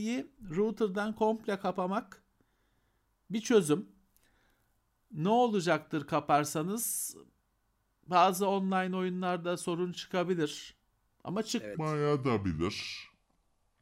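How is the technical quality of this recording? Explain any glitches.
The final two seconds contain one fault. From 11.75 s to the end, a section at the wrong speed plays at about 0.78 times normal, likely from being fitted to the wrong clock, so the speech turns slow and deep, roughly four semitones lower. Timing and pitch drop together, which separates it from a pitch-shift effect that would leave the pace intact.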